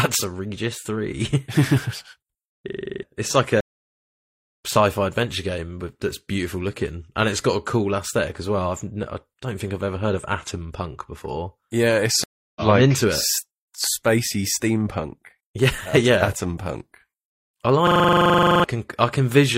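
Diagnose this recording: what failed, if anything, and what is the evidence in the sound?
At the driver or buffer stage, the system hung twice while the hardware kept replaying one ring buffer, a system hang loop. From 2.69 to 3.03 s, just before "it's like", a 42.67 ms slice repeats 8 times, and from 17.87 to 18.64 s it repeats 18 times. This produces a 23.4 Hz machine-gun stutter, which fits a 2048-sample buffer. About 0.3 s and 0.7 s of speech are lost.

At the network stage, the stream dropped and reconnected twice, a stream reconnect. After "it's like", silence runs from 3.61 to 3.92 s (311 ms), and the speech resumes roughly 0.3 s further on. A second gap runs from 12.24 to 12.61 s (324 ms) before "like I'm into it", and the speech picks up about 0.2 s later.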